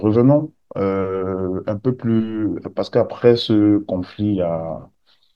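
No technical faults can be heard anywhere in this speech recording.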